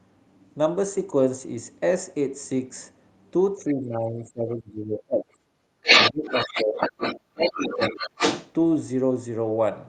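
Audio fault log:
3.56–5.46 s, 6.11–7.02 s, 7.33–8.20 s: speech suppressed in double talk. The talker's voice sinks by roughly 25 to 30 dB, thinning and breaking into pieces. The likely cause is the echo canceller failing to tell near talk from loudspeaker echo and pulling both down.
5.74–5.82 s: background gated by the echo canceller. The room sound dips by about 11 dB for a brief instant, then comes back. The canceller clamped the microphone while the loudspeaker played, and released it almost at once.
5.82–7.20 s, 7.41–8.51 s: other side's voice leaking through. A second voice comes through alongside the talker, in the first stretch roughly 5 dB above the speech, in the second roughly 5 dB below it. This is likely loudspeaker playback the echo canceller left in the microphone signal.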